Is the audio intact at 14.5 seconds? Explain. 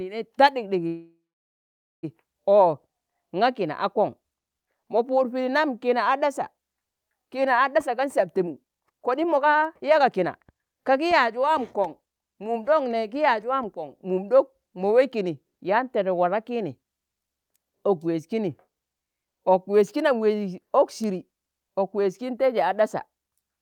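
Yes, at 14.5 seconds the speech plays through intact, with no dropout, click, distortion or other fault at that point.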